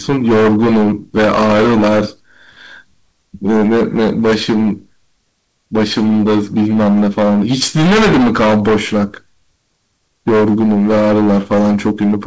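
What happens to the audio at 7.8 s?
At 7.8 s you're hearing the hard clipping that runs through the whole speech clip. The level is driven about 21 dB past what the stage can pass, so roughly a fifth of samples get their peaks sliced flat. That adds a harsh, buzzy fuzz on every loud syllable.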